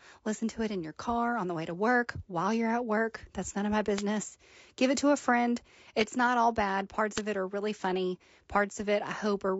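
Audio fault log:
throughout: low-delay AAC compression. The speech sounds rough and grainy, with noise filling the gaps between harmonics and a thin, synthetic top band. This is likely AAC-ELD coding, whose short frames resolve pitch poorly. The plainly audible damage fits a bitrate of about 32 kbps.
3.96 to 4.02 s and 7.15 to 7.20 s: wireless microphone noise hit. Each event is a brief swish of static lasting about 50 to 60 ms. The radio signal fades as reflections cancel, so receiver noise rises.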